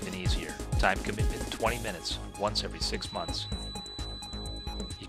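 A feedback whistle enters at 2.91 s and runs to the end of the clip. It is a thin, steady tone at 4 kHz, sitting roughly 10 dB below the main sound. Its level swells and fades slowly but never climbs into a howl. The likely cause is a loudspeaker-to-microphone loop held just at the edge of feedback. At that point one frequency keeps recirculating and sustaining itself without running away.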